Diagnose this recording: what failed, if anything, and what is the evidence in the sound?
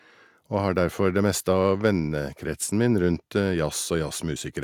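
Nothing in this speech recording points to a failure at any stage of the chain. No event in the sound calls for a diagnosis.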